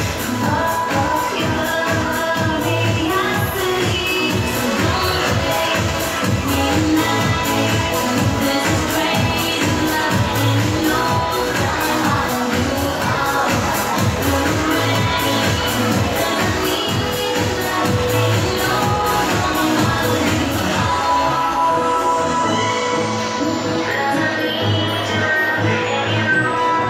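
The audio carries a single loose connector crackle from 4.69 s to 4.77 s, a short, irregular burst of scratchy crackle lasting roughly 75 ms. This is the sound of a worn or dirty contact in the cable or jack briefly making and breaking as it shifts. Each interruption chops the signal into fragments, and any DC present on the line turns those rapid transitions into pops, giving the burst its rough texture.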